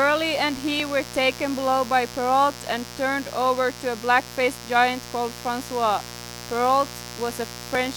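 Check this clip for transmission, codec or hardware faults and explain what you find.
Two faults are present in the speech.

A steady, raspy buzz sits under the speech for the whole clip, about 15 dB below it. This is mains buzz at 60 Hz: sharp switching spikes from a dimmer, rectifier or poor shielding enter the signal path twice per cycle, spreading harmonics well into the kilohertz range.

From 0.80 s to 7.75 s, a regular click recurs every 1.74 s, about five times in all. These are likely clock drift buffer slips. Two devices on independent clocks disagree by roughly 500 parts per million, so the buffer between them drifts until a small block of samples, around 50, is dropped or repeated.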